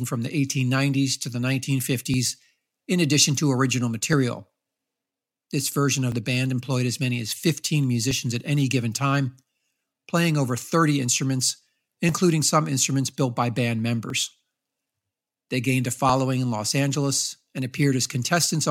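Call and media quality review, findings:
Overlap between stream segments. Tiny skips in the speech at 2.14–2.16, 4.13, 6.12, 8.11, 10.10, 12.09, 14.10 and 16.09 s. They repeat roughly every 2 s, which points to 2-second segment boundaries. Each drop is about 12–20 ms. The player trims overlapping time stamps between segments and discards real audio, so the waveform jumps at each join. Probable component: the segmenter or the player's stitching logic.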